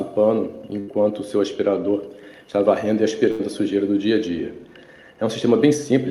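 Bursts of packet loss at 0.79–0.93 s and 3.31–3.50 s: each fills about 80 ms by continuing and fading the last sound, then skips 60 ms, showing as smeared, decaying spectrogram bands.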